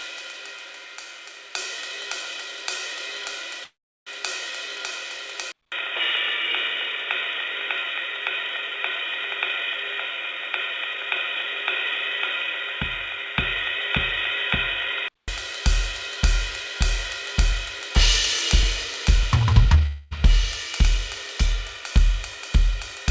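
From 3.64 to 4.09 s the music halts for about 0.43 s, likely a call audio freeze: a brief fading fill, then 360 ms of flat silence, then playback resumes where it stopped.

At 5.52 s, after a 200 ms silent gap, the input likely switched to a poorer device. Until 15.28 s the spectrogram shows nothing above 3.8 kHz, well below the 8 kHz ceiling of the G.722 call path elsewhere. The music sounds dull and boxy at an unchanged level, over a faint new noise floor about 50 dB down.

From 19.11 to 19.86 s a jitter buffer speed-up trims roughly 200 ms of short pitch-period pieces. The music runs at 132% speed with pitch unchanged, so the tempo audibly rushes.

What is likely a second call audio freeze follows immediately, from 19.86 to 20.13 s. It is a 250 ms fading fill with no silence, showing on the waveform as a decaying smear before normal playback returns.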